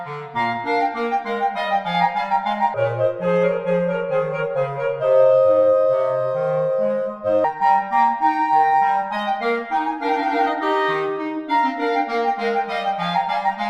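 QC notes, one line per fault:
2.74–7.44 s, section at the wrong speed: the sound abruptly turns deep and sluggish, running at 0.67 times its proper rate. Everything in this stretch is slowed by about a third and sits roughly seven semitones lower, until it snaps back to normal pace at 7.44 s. Because speed and pitch shift together, the likely cause is this segment being played or resampled against the wrong clock.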